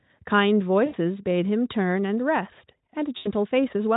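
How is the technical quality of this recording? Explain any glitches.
The recording has two short dropouts in the speech. Both are VoIP packet loss concealed by the speech codec. They run from 0.85 to 0.95 s and from 3.17 to 3.32 s. About 80 ms of audio went missing each time. The decoder filled each gap by repeating its last pitch and filter at falling gain. So the sound smears into a buzzy tone or coloured noise that fades. It stays weak or distorted for tens of milliseconds after the audio resumes. The Speex coding itself adds at most faint roughness.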